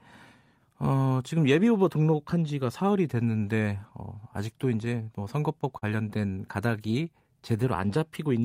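A speech recording with two timing faults. Between 4.85 and 5.84 s there are repeated stalls (stutter): six brief holds, the longest about 40 ms, where the receiver's jitter buffer ran dry and the last sound was extended while waiting for late packets. About 86 ms is filled this way and nothing is lost, but the passage drags and stutters. From 6.38 to 7.99 s a jitter buffer slow-down stretches the audio by 127 ms, to 93% speed at unchanged pitch, as repeated pitch periods rebuild the buffer's reserve.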